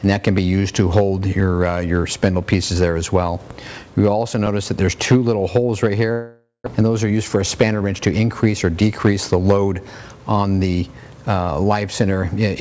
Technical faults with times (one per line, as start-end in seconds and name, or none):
0.38-4.47 periodic USB or driver dropouts
6.12-6.68 long network dropout
6.76-7.99 jitter buffer speed-up